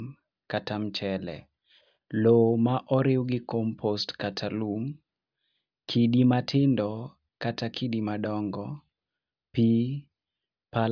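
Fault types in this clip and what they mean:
There are no fault types in this clip.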